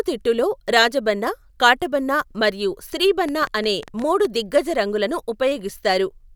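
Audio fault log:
3.29 to 4.26 s, train of clicks: about ten similar pops arrive unevenly, roughly 8.3 per second, poking a few dB above the speech and ticking through the gaps too. It's likely interference from nearby gear or a faulty connection or power supply injecting repeated pulses.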